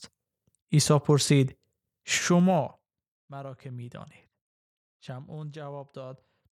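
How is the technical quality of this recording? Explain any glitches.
One glitch stands out in the speech.

Zipper noise, 2.35 to 3.33 s: a drop of around 20 dB is applied in unsmoothed 2 dB steps, roughly ten a second, each clicking into a ticking zip.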